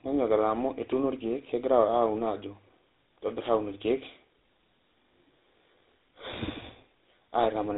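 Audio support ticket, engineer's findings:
Speech rough, muffled and warbly throughout; nothing above about 3.9 kHz. Tandem speech coding: CVSD delta modulation, then G.711 A-law, then GSM full rate at 13 kbit/s, each recoding the previous stage's degraded output, so the two speech coders' artefacts stack.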